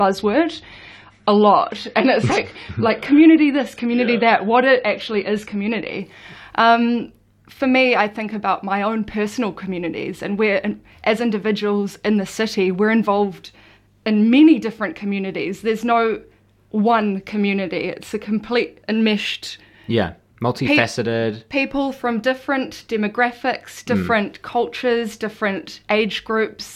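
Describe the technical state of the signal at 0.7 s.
At 0.7 s the audio is inside an adaptive stream starting at a low bitrate, lasting from 0.0 to 6.0 s. The player opened on a thin, low-quality stream, consistent with about 32 kbit/s AAC, before stepping up. The treble is dull and codec artefacts are stronger until quality jumps at 6.0 s without a gap.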